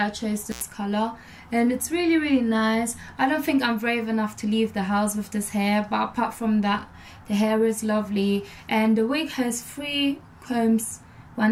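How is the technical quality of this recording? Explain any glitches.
The recording has one clear glitch, an intermittent contact between 0.51 and 0.62 s. A loose cable or plug briefly lost its connection, leaving the line open for about 81 ms, so the sound drops out abruptly with crackle where contact breaks and returns, and faint hiss fills the gap.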